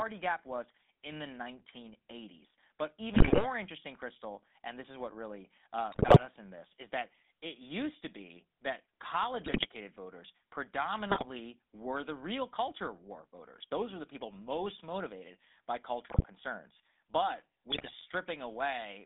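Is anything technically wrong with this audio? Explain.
Yes. The speech runs through a GSM full-rate codec throughout. Its pulse-driven vocal-tract model buzzes and roughens the voice, squeezed into roughly 250 Hz to 3.6 kHz. GSM bit errors hit at 3.14–3.47, 5.92–6.24, 9.46–9.67, 11.10–11.26, 16.10–16.25 and 17.72–17.97 s. Corrupted filter, pitch and gain values distort frames into squawks, pops and gargling.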